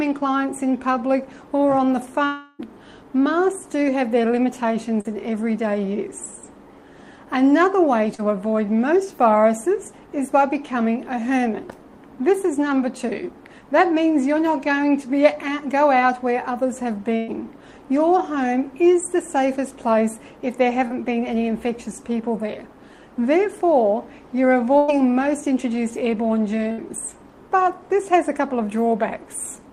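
From 2.25 to 2.61 s the sound is extended as a fading buzz or hiss for about a third of a second, then resumes further on; a long network dropout is the likely cause. At 5.01 to 5.07 s and 8.15 to 8.20 s, short concealed packet loss leaves brief smears where roughly 40 ms went missing and was synthesised from the preceding audio. A burst of packet loss at 17.16 to 17.30 s (120 ms), 24.78 to 24.90 s (100 ms) and 26.72 to 26.80 s (60 ms) produces held, decaying continuations before the audio jumps ahead.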